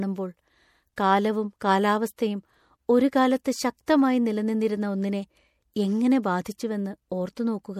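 Speech that carries plainly audible codec damage throughout. The treble stops dead at about 17.2 kHz, and the quieter spectral detail has a watery, swirling quality, with the s sounds turning metallic. That is the signature of MP3 compression, likely at a low rate in the region of 64 kbps, where the encoder runs short of bits, drops the top band and lets weak frequency lines switch on and off between frames. At 3.86 s there is a pre-echo just before "നിലനിന്നിരുന്ന ഒന്നിനെ": a brief hiss, about 18 ms long, leads into the attack and softens it. This happens because the codec spreads the quantisation noise meant for the loud onset across its whole transform block, so the noise also lands in the quiet moment before the onset.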